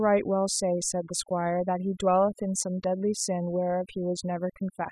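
A noise reduction stage set far too aggressively has been applied across the whole of this speech recording, a case of overdone noise removal. The processor judges individual frequency bands against its noise estimate and pulls any that come close down hard or out entirely, so the softer parts of the voice are removed along with the noise. The result is a background of near silence dotted with twinkling specks.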